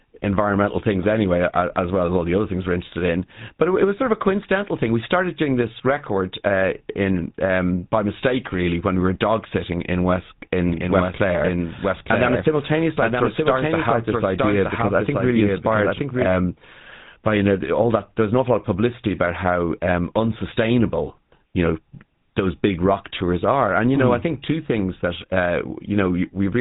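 GSM full-rate codec damage runs through the whole clip: the speech is plainly buzzy and gravelly, as you'd expect from a coder that models the vocal tract and feeds it a sparse pulse train. Nothing gets through above about 3.8 kHz, which fits 13 kbps GSM full rate.

A doubled audio track appears from 10.70 to 16.26 s. A second full-band copy of the speech trails about a second behind and sits roughly 5 dB lower, with no reverb tail, and it cuts in and out abruptly. It was likely captured twice through a slower path.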